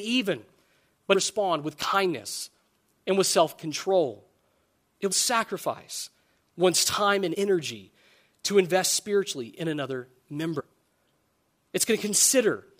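At 1.14, 5.11 and 7.34 s, and from 10.59 to 10.61 s, the speech breaks into a brief glitch. This is damaged data in a compressed stream: corrupted frames are misdecoded while the decoder resyncs. Each shows as a thin broadband vertical smear on a spectrogram.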